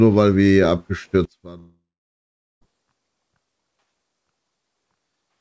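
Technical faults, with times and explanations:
1.25 s to the end: one channel inverted. The sound falls by about 22 dB and turns faint, likely from one channel's polarity being flipped so that the mono sum cancels.
1.58 to 2.63 s: long network dropout. The last sound carries on as a fading buzz, then goes quiet for about 0.78 s and resumes with roughly a second missing, likely from lost packets.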